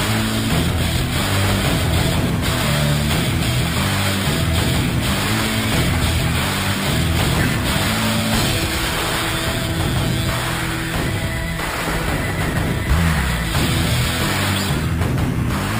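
Right from the start and running the whole way through, there's imaging from sample-and-hold upsampling. Each original sample was simply repeated with no smoothing filter, so mirrored copies of the spectrum sit around multiples of the old rate. The first copy lands between 6 and 12 kHz, about 14 dB below the sound itself, which fits 12 kHz material stepped up to 48 kHz. It comes across as a bright metallic fizz that rises and falls with the sound.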